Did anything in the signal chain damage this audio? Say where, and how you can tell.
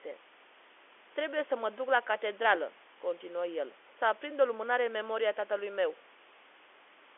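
No, nothing in the chain damaged this audio.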